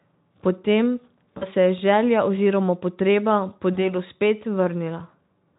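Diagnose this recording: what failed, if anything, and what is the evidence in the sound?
VoIP packet loss concealed by the speech codec, a network fault, at 1.37 to 1.46 s and 3.74 to 3.77 s. About 40 ms, then 20 ms, went missing. The decoder extended its last pitch and filter at falling gain, smearing speech into a fading buzz or coloured noise that stays weak briefly afterwards.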